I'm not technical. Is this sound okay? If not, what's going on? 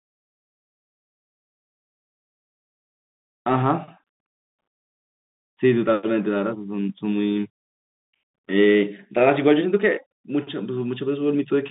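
No, the Bluetooth CVSD headset codec squeezes this speech throughout. Nothing above 3.8 kHz survives, and unlike a plain phone line, its crude up-down coding adds scratchy s sounds and grainy hiss.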